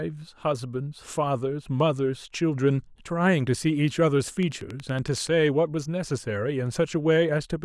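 A train of clicks runs through this speech clip from 4.43 to 5.28 s: about ten near-identical sharp ticks at a steady 10.7 per second, each poking a few decibels above the speech level, so they cut through the talking and any gaps alike. Such an evenly spaced, same-shaped pulse sequence is most likely outside interference coupling into the signal chain, such as nearby equipment or a faulty connection or power supply.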